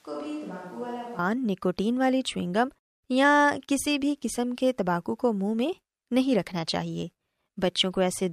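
Speech clip that opens already on a switch to a distant microphone. Until 1.19 s it sounds roomy, thin and about 10 dB quieter, with raised background noise, likely a camera or room mic, then it cuts back abruptly.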